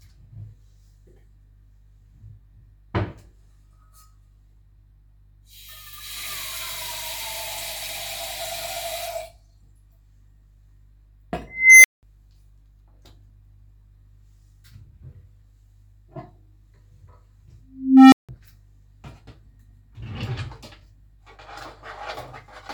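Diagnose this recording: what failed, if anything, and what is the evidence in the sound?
An unstable filter in the processing stage failed twice. At 11.47 s a tone near 2 kHz swells over 0.37 s, clips, then drops to 0.19 s of silence by 12.03 s. At 17.67 s a tone near 300 Hz builds over 0.46 s, with 0.17 s of silence ending at 18.29 s. Each time, a recursive filter's feedback ran away until the output overflowed and reset. A spectrogram shows a brightening horizontal line ending in a blank gap. The waveform shows a widening envelope that clips, then goes flat.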